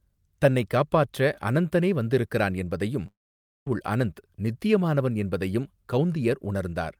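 A speech clip with a long network dropout from 3.07 to 3.67 s, just after "காப்பாற்ற அனந்தனே வந்திருக்கிறான் என்பதையும்". The last sound smears into a fading buzz, then about 0.53 s of near silence follows before speech resumes at "அனந்த் நித்தியமானவன் என்பதையும்" with roughly 0.59 s of audio gone. The likely cause is a stall in packet delivery, with the receiver's concealment stretching the final sound until it gave up. On a spectrogram, harmonics blur into a decaying smear, then a blank gap. The waveform shows a tapering tail, then a flat line.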